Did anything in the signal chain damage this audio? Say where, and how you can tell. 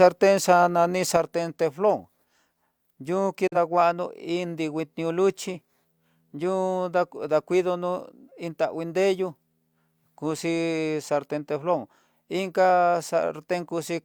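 Yes. From 1.17 s to the end, one channel drops out, likely a broken lead in the analogue wiring. The mono sum falls abruptly by about 6 dB.

A digital broadcast dropout occurs at 3.47 s. The receiver muted on a failed frame, so an 8 ms fade leads into a silent hole of about 43 ms, consistent with one lost frame.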